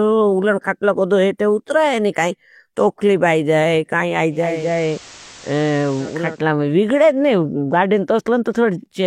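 Digital radio blending to analogue, 4.29 to 6.46 s, after "तोखली बाई जाये काई" and before "में विगड़ेद": the receiver lost digital reception and cross-faded over 0.48 s to the FM broadcast, adding hiss roughly 20 dB down and dropping the level about 2 dB.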